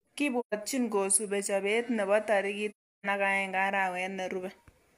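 At 0.39–0.54 s and 2.70–3.06 s, just after "nebo tarik", AAC frame loss with muting leaves smoothly faded silent gaps, unlike clicky hard dropouts.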